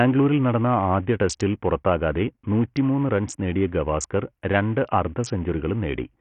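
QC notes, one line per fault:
Throughout: Bluetooth SBC compression, likely the cause of the dull, gritty character of this speech. Nothing is present above 11.1 kHz, so the top sub-bands have been starved of bits and the upper treble is missing. What remains is coarsely quantised, leaving heavy codec damage: a rough granular noise and aliasing that ride along with the speech. The degree of damage fits a low bit pool, around 48 kbps.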